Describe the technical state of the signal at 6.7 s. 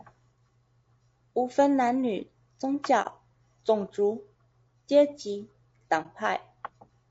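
At 6.7 s the speech is rough and grainy throughout, with noise between harmonics, likely low-delay AAC compression whose short frames starve pitch detail, consistent with roughly 32 kbps.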